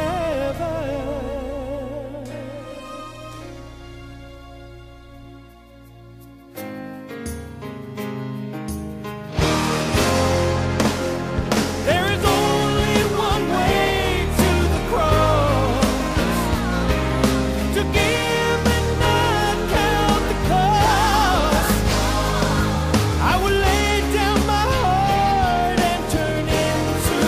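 No technical faults detected anywhere in the recording.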